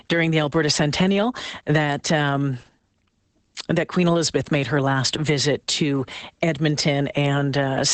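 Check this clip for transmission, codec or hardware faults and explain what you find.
There's one fault, and it runs the whole length of the speech: Opus voice compression. Nothing comes through above about 8.8 kHz, which fits Opus in its wideband SILK mode. SILK models the voice with linear prediction and codes the excitation coarsely at low rates, and the damage here is plainly audible, pointing to something around 12 kbps. That leaves the speech muffled, a bit hoarse and faintly robotic.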